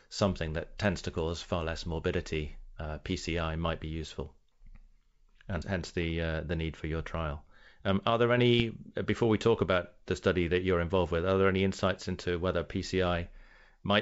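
Bit errors on an ADPCM link at 4.03 to 4.12 s and 8.60 to 8.72 s disturb this speech: flipped bits upset the decoder's step size and predictor, causing pops and rough bursts.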